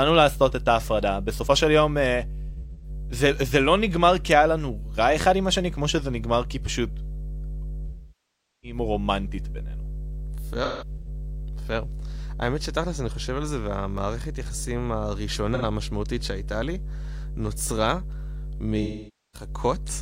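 A steady 50 Hz mains hum runs throughout, about 10 dB below the speech. It is a fixed low tone from power-line coupling through a ground loop or transformer, with no rasp of the upper harmonics that would make it a buzz.

AAC frame loss with concealment first appears from 2.49 to 2.89 s. Frames totalling 256 ms drop out, scattered over 341 ms with the longest run about 100 ms. The decoder fills these gaps from the last good spectrum, producing smeared, noisy, phasey patches rather than clean silence.

A longer continuous loss follows from 7.86 to 8.78 s. Here 768 ms is lost, and the concealment decays toward silence before the sound fades back in.

Another scattered loss runs from 10.63 to 11.08 s, with 299 ms lost across 512 ms and the longest run about 150 ms.

From 13.73 to 14.72 s come CD scratch ticks. There are five tiny clicks, the longest about 1 ms, spaced at a regular rhythm of roughly four a second, once per disc rotation. 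Their brevity and steady spacing set them apart from the smeared AAC gaps.

AAC concealment returns briefly from 15.54 to 15.65 s as an 85 ms smear. A final 512 ms loss from 18.82 to 19.49 s again blurs and thins the sound.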